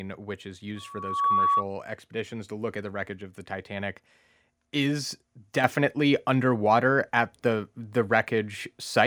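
A speech recording with two faults. Loudspeaker feedback squeal runs from 0.76 to 1.66 s, between "which is" and "expeditions to look at": a 1.1 kHz tone swells over roughly half a second to about 10 dB above the voice, because the microphone is re-capturing its own loudspeaker. At 5.64 s the microphone volume is stepped up, so voice and background jump together by about 6 dB as the input gain is raised in one increment.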